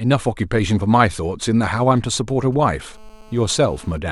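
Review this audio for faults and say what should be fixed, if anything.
GSM signalling bursts appear from 1.82 to 2.93 s: a galloping run of ticks and short buzzes at a 217 Hz rate, sitting roughly 30 dB below the speech. A 2G phone close to the recording chain is exchanging brief signalling transmissions with the network, and some audio stage is rectifying those radio pulses into audible clicks and buzz fragments that bear no relation to the speech. Keeping mobile phones well away from microphones, cables and preamps, or switching them to flight mode, prevents this.

GSM phone buzz follows from 2.94 to 3.98 s as a steady, hard, raspy 217 Hz buzz with many harmonics, about 29 dB below the speech. A 2G phone in a call now transmits in continuous bursts 217 times a second, and the circuit demodulates each burst, producing a constant rasp unrelated to the speech. Shielded, balanced cabling with RF filtering at the inputs, plus distance from the phone, prevents it.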